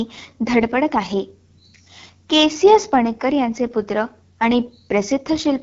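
Throughout the speech, AMR wideband (HD Voice) codec damage is plainly audible. The voice sounds rough and raspy, which fits AMR-WB's low 8.85 kbit/s mode. The pulse-driven vocal tract model struggles there. Nothing is heard above about 7.3 kHz.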